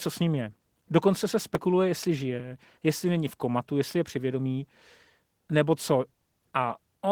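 A speech recording with plainly audible Opus voice compression throughout: voices sound somewhat hoarse, grainy and faintly robotic, though the band still reaches about 20.4 kHz. At 16 kbps in hybrid mode, the SILK coder handles everything below 8 kHz with a coarsely quantised excitation, while a thin CELT layer covers the highs. At 1.55 s the sound makes a small forward jump, with no gap. This is likely a dropped buffer (overrun), where roughly 10 ms of samples were overwritten before being read and the surrounding audio was spliced together.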